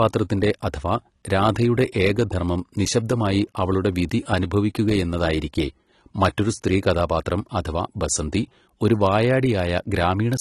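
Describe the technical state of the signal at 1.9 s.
At 1.9 s the speech carries the AAC compression damage that runs through the whole clip. Nothing reaches above about 12.1 kHz, and the band below sounds dull and smeared, with a fizzy, warbling edge on sibilants. This is likely AAC-LC quantising its frequency lines hard against a hearing model, which fits a low bitrate near 32 kbps. A plain low-pass filter would only remove the top; here the remaining spectrum is patchy and textured too.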